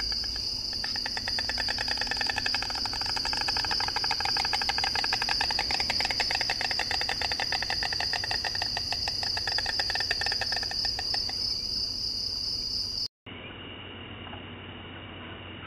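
A recording of sounds in which, at 13.06 s, the audio drops out for about 0.2 s and then returns dull and boxy through to the end at 15.66 s, with nothing above 3.8 kHz, a level shift of around 5 dB and faint new background noise far below the signal. The likely cause is an input switched to a poorer device mid-recording. A spectrogram shows a blank gap and then a hard ceiling at 3.8 kHz, and the waveform steps in amplitude after the gap.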